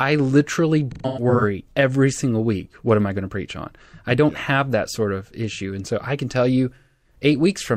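Around 0.91 to 1.44 s there's AAC frame loss with concealment. About 0.3 s of frames drops out, scattered across half a second, with the longest gap around 150 ms. The decoder patches each hole by reusing the last good spectrum, so the speech turns smeared and a bit noisy and phasey rather than going silent. It happens again from 6.75 to 7.16 s, where roughly a quarter second is lost and patched the same way.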